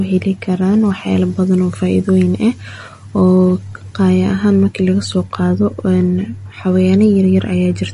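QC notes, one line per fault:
Throughout, MP3 compression: the speech sounds dull and watery, with a swirling, unsteady texture and nothing above 10.6 kHz, so the top of the sibilance is gone. The likely cause is a heavily bit-starved MP3 encode, consistent with roughly 40 kbps. The encoder cut the treble at a fixed point and zeroed weak frequency lines that flicker on and off from frame to frame, which produces the plainly audible warbling damage.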